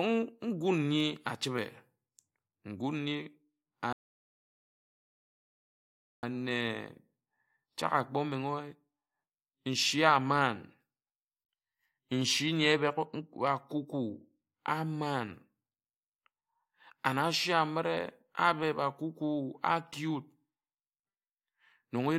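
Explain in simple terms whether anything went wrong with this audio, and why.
Something did go wrong. At 3.93 s the speech suddenly stops and the clip falls completely silent until 6.23 s, adding about 2.3 seconds. This is a rebuffering stall: the player used up the audio it had downloaded and had to wait for more. Unlike a dropout, where a piece of the sound is missing and it jumps ahead, the speech here picks up exactly where it was cut off, so nothing is skipped. Only time is added.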